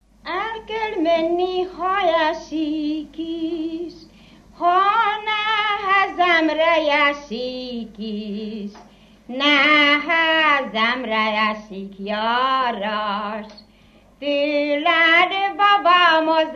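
No technical faults are audible.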